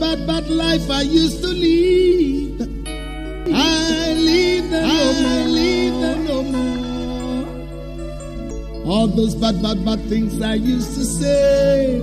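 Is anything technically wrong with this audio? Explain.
Yes. From 3.46 to 8.50 s there is a doubled audio track: a second, full-band copy of the sound, about 5 dB quieter and roughly one and a half seconds behind, likely from a slower capture path. Unlike echo, the copy has no decay or room colour, and it starts and stops abruptly.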